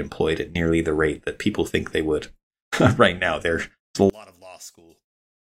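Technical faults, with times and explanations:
4.10 to 5.38 s, one channel inverted: the speech falls by about 28 dB, likely because one stereo channel has reversed polarity and the shared centre cancels in a mono sum. Unlike a dropout or gain drop, a faint residue of the channel difference remains.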